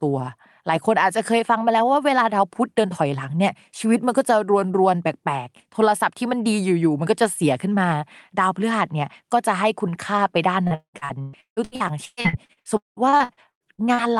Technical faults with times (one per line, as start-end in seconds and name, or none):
10.67-14.01 repeated packet loss (robotic sound)